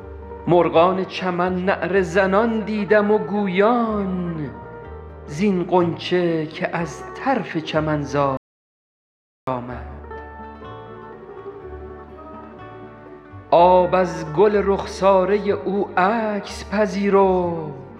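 At 8.37 s the sound cuts out abruptly into an audio dropout to silence lasting 1.1 s, until 9.47 s. The input was likely lost while recording continued, writing silence: the waveform goes flat and the spectrogram shows an empty band with no room tone.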